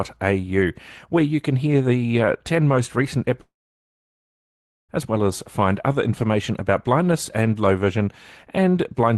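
A speech clip in which the sound cuts out from 3.41 s to 4.91 s. The last sound trails on briefly and fades, then about 1.4 s of silence follows before the speech resumes. About 1.5 s of material is simply missing, not delayed. This is likely a long network dropout: no audio reached the receiver, so it could only stretch the final sound before giving way to silence. The high end stops near 12 kHz, which fits an Opus call path.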